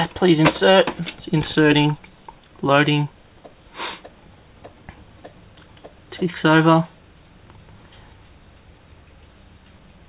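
No technical faults can be heard in this clip, so there is nothing to describe in time order.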